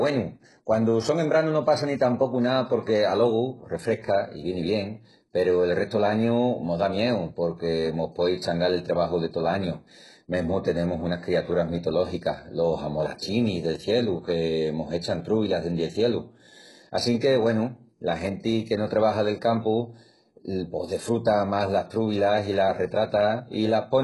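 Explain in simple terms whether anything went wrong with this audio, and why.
Something did go wrong, and it runs through the whole clip. The speech has heavy damage that is likely HE-AAC compression. The treble is rebuilt from lower sounds rather than kept, so s sounds come out gritty and lispy, and nothing survives above about 11.5 kHz.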